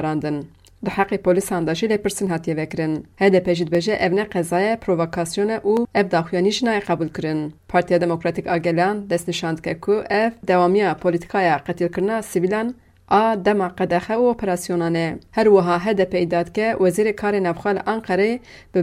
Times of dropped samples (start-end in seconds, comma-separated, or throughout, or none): 2.27, 3.75, 5.77